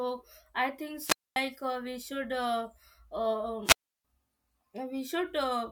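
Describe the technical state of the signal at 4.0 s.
At 4.0 s the speech is inside a wireless microphone squelch dropout from 3.64 to 4.05 s, which holds about 0.33 s of near-silent muting: a faded radio signal triggered the receiver's squelch.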